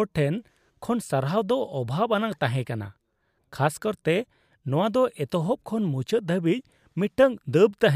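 No technical faults can be heard anywhere in this recording.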